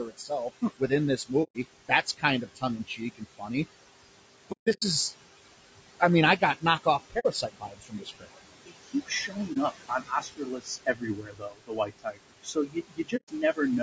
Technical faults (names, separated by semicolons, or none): noise suppressor artifacts; low-delay AAC compression; speech cut by the noise suppressor; AAC frame loss with muting